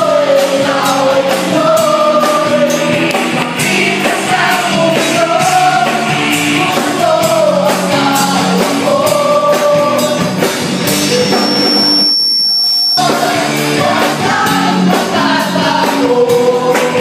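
From 10.75 s to 13.01 s a thin, piercing tone at 5.4 kHz creeps in and swells over roughly a second and a half until it is about as loud as the rest of the sound, then stops. This is loudspeaker feedback squeal: a microphone was picking up the loudspeaker it was feeding, and at 5.4 kHz the round trip through that loop gained more than it lost, so the tone kept reinforcing itself until the loop was broken.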